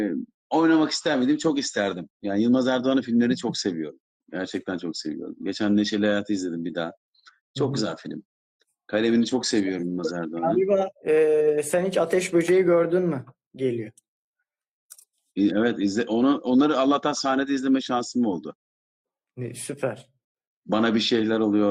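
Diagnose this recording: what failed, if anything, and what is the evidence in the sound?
Nothing failed; no fault is audible at any stage.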